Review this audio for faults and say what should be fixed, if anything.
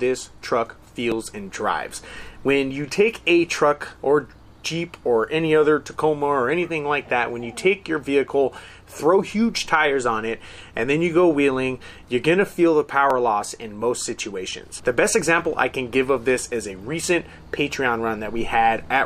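Overlapping time stamps between consecutive 6-second stream segments made the player trim audio that was never actually duplicated, so about 7 and 17 milliseconds vanish and the waveform jumps. This overlap between stream segments is heard as brief clicks or tiny skips at 1.12 s and 13.1 s. To prevent it, the packager should write contiguous, non-overlapping segment time stamps.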